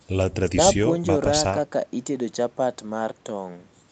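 Nothing goes wrong anywhere in this bit of speech, and what you hear is just an ordinary call, with the Opus codec and the microphone processing doing their usual job and leaving nothing above about 8 kHz.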